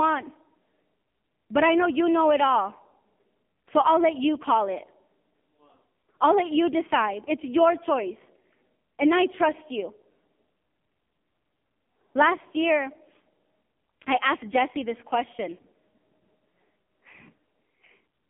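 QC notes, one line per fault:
Throughout: AMR narrowband mobile codec (AMR-NB). The speech is confined to a telephone line band of about 200 Hz to 3.4 kHz, with nothing above 3.4 kHz, well inside the 4 kHz limit set by the codec's 8 kHz sampling. It rebuilds the voice from a vocal-tract model excited by a few pulses per 5 ms subframe. The codec damage is heavy: the voice sounds buzzy and synthetic, which fits one of the lowest AMR modes, around 5.9 kbps.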